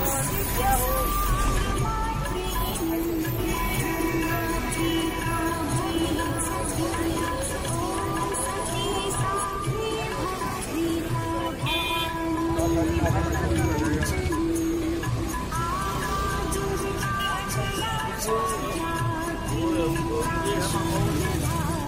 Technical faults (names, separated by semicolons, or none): doubled audio track